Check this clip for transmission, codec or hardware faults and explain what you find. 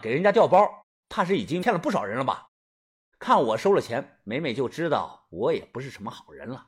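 One fault stands out. From 1.58 to 1.63 s a brief glitch cuts into the speech, caused by damaged data in the compressed stream. Corrupted bytes in that stretch made the decoder misread the frames and lose sync before it locked onto a later frame header. The silences between phrases drop cleanly to quiet, which is muted pauses doing their normal job.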